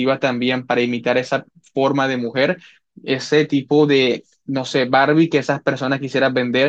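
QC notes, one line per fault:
Nothing to flag here, as no technical faults turn up anywhere in the speech.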